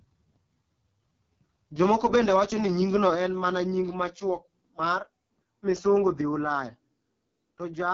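Throughout, the speech carries the sound of the AMR wideband (HD Voice) codec at heavy damage. The texture points to its lowest mode, around 6.6 kbit/s. The codec rebuilds the voice from a pulse-excited vocal tract model. At this rate it has too few bits to follow the detail. Voiced sounds come out rough and raspy. The top band is filled with shaped noise rather than real content. Nothing is present above 7.5 kHz.

At 2.16 s the level drops suddenly by about 3 dB. This is likely the microphone volume stepped down by the call software. Voice and background fall together, in one step. There is no fade.

From 2.96 to 3.09 s the loudest syllables take a harsh, crackling edge. This is likely microphone overload. The input runs about 1 dB past the converter's ceiling. The peak tops are flattened. Only a small fraction of samples, under one percent, are cut. That is still enough to be heard as grit on the peaks.

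Right after that peak, at 3.15 s, the level drops again, by about 5 dB. This is likely another microphone volume step down, reacting to the clipping just before. The change is abrupt and affects everything in the signal at once.

At 4.17 s a third step down follows, about 2 dB. This is likely the same automatic input reduction. It is smaller but still sudden. Voice and background lose level together.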